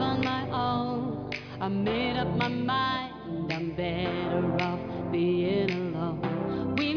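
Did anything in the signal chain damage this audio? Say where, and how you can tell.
No, nothing in the signal chain damaged this audio that I can hear at any stage.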